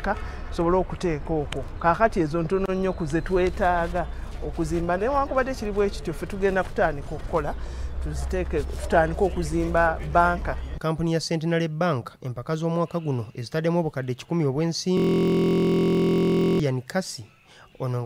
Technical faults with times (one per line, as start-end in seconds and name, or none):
14.97-16.60 system hang loop